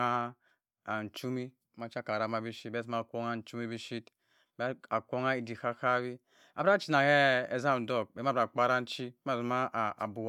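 No technical faults can be heard anywhere in the speech, with the signal holding steady and continuous for its whole duration.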